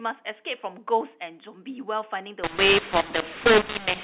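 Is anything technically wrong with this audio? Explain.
Yes. A mu-law and A-law mix-up runs from 2.44 s to the end of the clip. The speech was coded with G.711 mu-law, the telephone format whose band stops at 4 kHz, but from that point the 8-bit codes are read back as A-law. The two laws map codes to levels differently, so sample amplitudes come out wrongly scaled, some too loud and others too soft, and near-silent samples are pushed well above silence. The speech turns harsh and distorted, and the gaps fill with noise.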